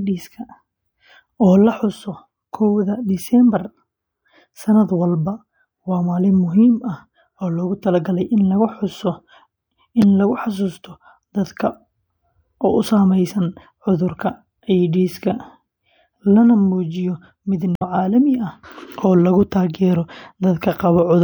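At 10.02 s and again from 17.75 to 17.82 s, the speech is broken by short glitches from damaged data in a compressed stream. Corrupted bytes made the decoder misread those frames, lose sync and hunt for the next valid frame header.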